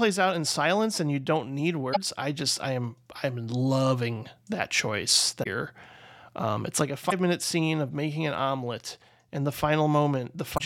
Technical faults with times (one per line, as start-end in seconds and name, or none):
1.90-1.97 damaged data in a compressed stream
5.40-5.47 damaged data in a compressed stream
7.07-7.12 damaged data in a compressed stream
10.54-10.61 damaged data in a compressed stream